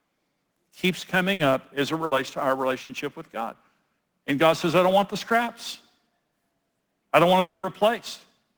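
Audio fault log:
Throughout: sample clock jitter. A fine hiss and graininess rides on the speech. It grows on loud passages and bright, sibilant sounds and disappears in the pauses. The converter's clock wavers by a few microseconds, so each sample is taken slightly early or late. On steep waveform slopes those timing slips become amplitude errors, here roughly 25 dB below the speech, which is why the roughness follows the level and the high frequencies.
1.33 s, 2.05 s, 2.83 s: burst of packet loss. Three short blips of about 0.09 s each. The speech briefly turns into a held buzz or fading hiss, then jumps ahead. The second falls between "as it" and "to our", the third just after "to our". Each time a run of packets never arrived. The receiver stretched the last sound for about 60 ms while turning it down, and about 60 ms of speech is simply missing.
7.39–7.66 s: long network dropout. Right after "I don't want" the speech freezes into a decaying buzz or hiss, then falls to about 150 ms of silence before returning further on, with roughly 240 ms of speech gone. 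This is likely a stretch where no audio reached the receiver at all. It kept extending the last sound and fading it until it gave up and went quiet, so the resumed speech starts mid-flow.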